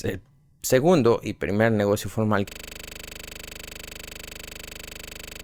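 Right after "y primer negocio formal", at 2.49 s, a system hang loop starts: the machine froze and a 40 ms chunk repeats at 25 Hz, a rattling buzz, until the end.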